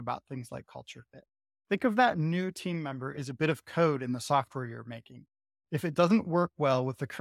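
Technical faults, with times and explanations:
No technical fault can be heard in this speech recording. Nothing in it calls for a time or an explanation.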